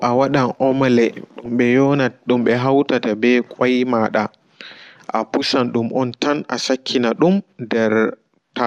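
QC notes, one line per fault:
1.45–1.48 s, DAB burbling: a short burst of watery, bubbly blips in the speech. Weak reception let bit errors slip past the error correction into the MP2 audio data, with an error rate that sounds like somewhere around a tenth of a percent. Corrupted samples drop little noise blips into individual sub-bands, and any bad scale factors that get through make sub-bands jump in level, which gives it that burbling character.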